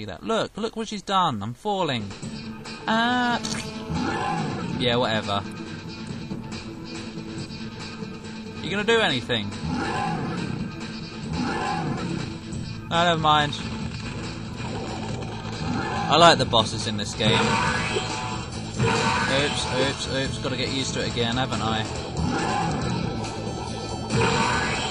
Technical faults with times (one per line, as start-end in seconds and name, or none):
2.95-3.94 GSM phone buzz
19.37-22.07 GSM phone buzz